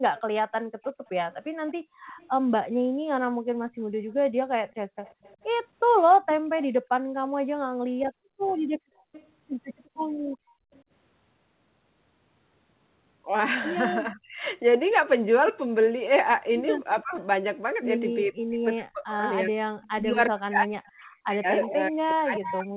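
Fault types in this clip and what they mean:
Echo leak: A copy of the speech returns 358 ms after the original, about 25 to 30 dB below it early on and only about 10 dB below near the end. A loudspeaker's echo canceller likely let it through. Unlike gating, this adds sound.
Background gated by the echo canceller: The room background drops sharply, by up to about 33 dB, in brief moments adding up to roughly two and a half seconds. Only the background vanishes and the talker stays intact, which separates this from double-talk suppression.
Speech suppressed in double talk: The talker's own voice dips by roughly 35 to 40 dB, briefly near 14 s and throughout the final stretch, likely because the canceller mistook it for echo while both sides spoke. Here the speech itself is lost, not the background.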